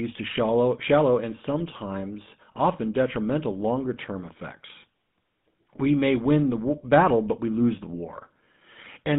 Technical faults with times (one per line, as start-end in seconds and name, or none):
0.00-9.19 GSM full-rate codec
5.56-5.58 lost GSM frames